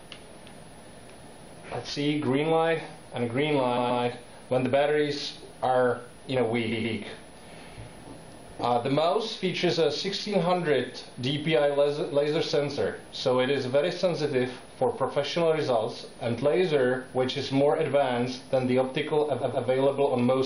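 Switching supply whistle runs through the whole clip: a thin high tone near 10 kHz, wandering between 10.24 and 10.42 kHz and sitting well below the main sound. A switching power supply is cycling at an audible rate and leaking into the signal.

Repeated frames occur at 3.76 to 4.02 s, 6.71 to 6.96 s and 19.40 to 19.66 s. Each time a 128 ms block of compressed audio is played two extra times, producing a short stutter and adding 256 ms. The block length points to a run of several codec frames being written or sent again.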